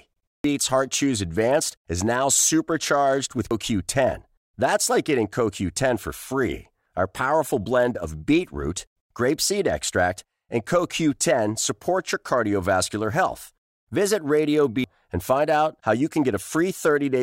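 At 0.44 s the speech jumps abruptly forward, losing roughly 0.7 s. The same thing happens at 3.51 s with a smaller gap of about 0.2 s, and again at 14.84 s with about 0.7 s missing. These are compressed frames skipped: the decoder never played whole blocks of the stream. The missing spans fit about seven, two and seven frames of roughly 93 ms.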